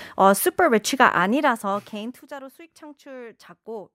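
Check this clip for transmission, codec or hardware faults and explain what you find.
No transmission, codec or hardware faults are audible here.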